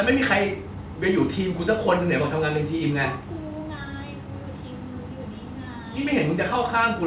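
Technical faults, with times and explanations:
No technical faults can be heard in this speech.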